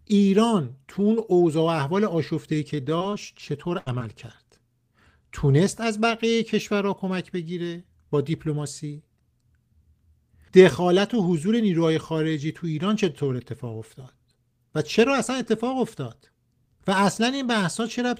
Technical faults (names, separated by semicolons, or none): repeated packet loss (robotic sound)